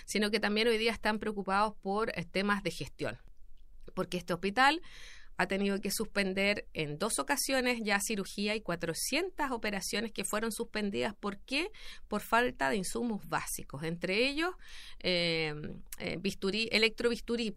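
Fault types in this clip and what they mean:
Audio missing between chunks: the recording likely ran in 5-second chunks and lost about 20 ms at each handover, with the two sides joined directly. The speech skips briefly at 3.28 s and again at 8.26 s, about five seconds apart.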